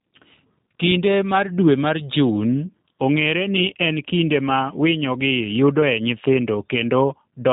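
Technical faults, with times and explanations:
Throughout, G.729 codec: the speech has plainly audible coding damage, with a rough, slightly synthetic texture. Nothing above about 3.8 kHz survives, so sibilants and brightness are gone. The sound is rebuilt from a vocal tract filter and a pitch predictor, with only a few pulses per short frame standing in for the true excitation. That sparse model is what roughens the speech, and the sound fits a coder running at around 8 kbit/s.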